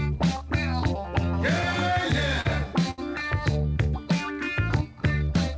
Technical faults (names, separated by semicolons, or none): short stall from a late packet